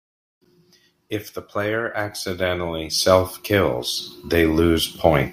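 No technical faults can be heard in the speech. Nothing in the audio points to a problem in how it was captured, processed or delivered.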